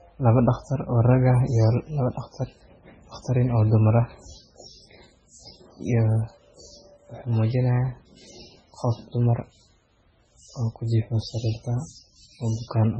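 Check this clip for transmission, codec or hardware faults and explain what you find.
One codec fault runs through the whole clip. Throughout, the speech is band-limited with nothing above 9.7 kHz and sounds watery and swirly, likely MP3 compression at a very low bitrate around 16 kbps. Starved of bits, the encoder cuts the treble and zeroes weak frequency lines that flicker between frames. That flicker, with metallic chirps on s sounds and smeared attacks, distinguishes it from a plain low-pass filter, which removes treble without any swirl.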